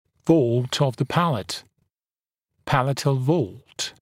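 No technical faults are audible.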